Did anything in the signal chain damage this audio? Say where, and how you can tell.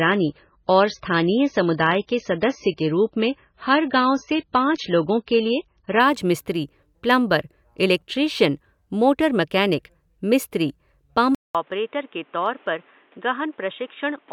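Yes, two spots. The first is at the network and codec stage: from the start to 6.0 s the speech has nothing above 6.6 kHz and a smeary, swirly edge. Then it jumps to full, clean sound with no gap. That fits an adaptive stream starting at a low bitrate, probably around a 16 kbit/s MP3 rung, and stepping up to something near 128 kbit/s once the player had measured the connection.

The second is at the input. At 11.35 s there's a 200 ms dropout, and from there to the end everything above 3.8 kHz is gone. The level sits a few dB lower, with a new noise floor roughly 30 dB under the speech. That's likely the input switched to a poorer device, such as a headset mic in call mode.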